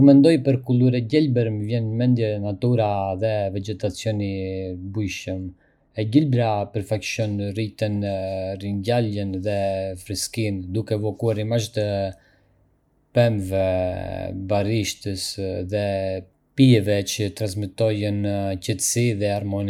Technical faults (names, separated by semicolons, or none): de-emphasis applied wrongly